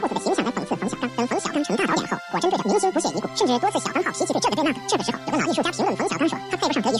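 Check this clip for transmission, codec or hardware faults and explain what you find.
There's one fault, and it runs the whole clip: audio read two samples at a time, giving double speed. The reader treated each pair of samples as one frame, so everything plays 2x fast and 12 semitones up, a full octave.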